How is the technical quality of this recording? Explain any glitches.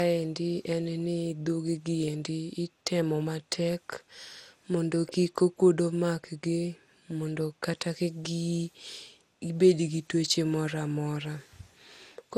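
The recording is degraded throughout by one fault. Generation loss runs for the whole clip. The speech sounds swirly, smeared and hollow, with consonant attacks blurred and nothing audible above 17.1 kHz. The likely cause is repeated lossy re-encoding, around fifteen passes, with a character that fits MP2 at about 96 kbit/s. Each pass quantises the audio again on a shifted frame grid, so noise piles up beyond what that bitrate alone would produce.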